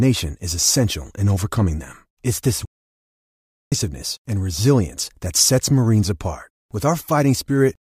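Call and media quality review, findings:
Playback stall, 2.65–3.72 s: speech cuts to silence for about 1.06 s, resuming at "and resilience that sets". Likely player buffer underrun or blocked audio thread.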